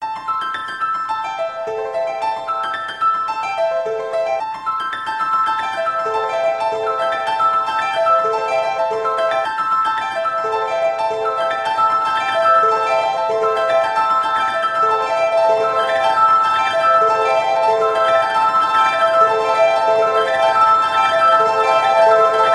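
Nothing stood out on listening to these sounds.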